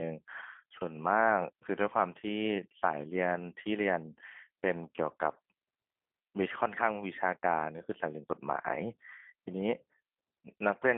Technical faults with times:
0.00-10.98 G.729 codec

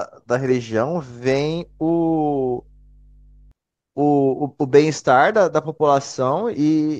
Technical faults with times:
1.28-3.51 mains hum

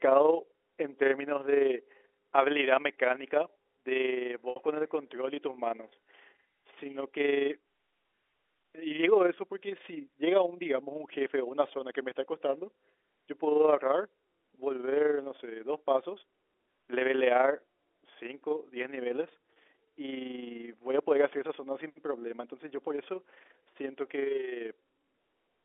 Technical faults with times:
0.00-25.65 overlap-add ripple
4.50-4.56 packet loss with pitch repetition
19.53-19.56 packet loss with pitch repetition

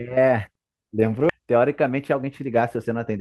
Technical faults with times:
1.29 skip ahead
1.40-3.17 jitter buffer speed-up

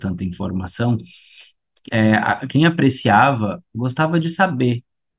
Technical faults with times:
none

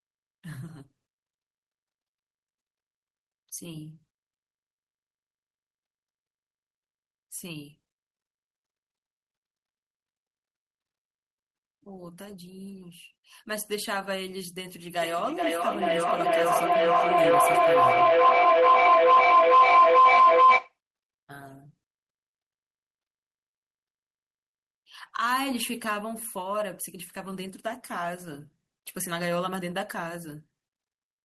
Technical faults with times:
15.01-20.78 feedback howl

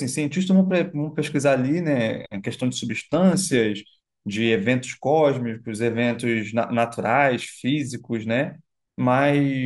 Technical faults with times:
none

